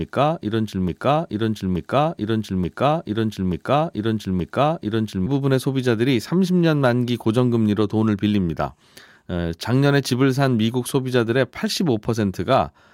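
Speech clip with a broken-record loop already under way at 0 s: an 0.88 s fragment repeats five times until 5.26 s, likely from a stalled player or stream.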